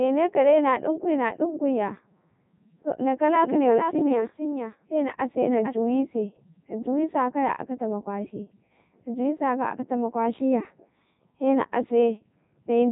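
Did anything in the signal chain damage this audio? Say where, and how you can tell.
Yes. The damage is at the codec stage and runs the whole clip: the speech has the robotic, buzzy quality of the Codec 2 vocoder, heavily degraded, in its top 3.2 kbit/s mode. Only pitch, voicing, energy and a coarse spectral envelope survive; the decoder rebuilds the voice from sine waves, so the original waveform is gone. On a spectrogram, energy stops at about 3.8 kHz, and the waveform won't match the source.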